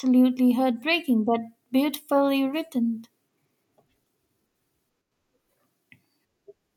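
Just after "heartbreaking but", from 1.97 to 2.09 s, the speech dips abruptly by about 6 dB. It dips again from 5.01 to 5.12 s. Both dips are likely one channel dropping out. Only the other channel's share survives the mono sum.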